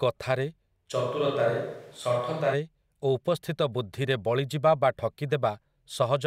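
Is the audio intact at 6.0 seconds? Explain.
Yes, at 6.0 seconds the speech plays through intact, with no dropout, click, distortion or other fault at that moment.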